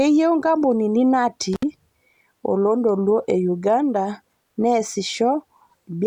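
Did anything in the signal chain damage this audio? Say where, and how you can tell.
Yes, there's an intermittent contact in the analogue wiring. Around 1.53 s the speech drops out and comes back by 1.63 s, with a gap of about 65 ms. You get a crackle as the connection breaks and again as it remakes, and in between only faint hiss instead of signal. That pattern is a loose plug or cable briefly opening the circuit, not a digital dropout, which would be a clean silence with no scratchy edges.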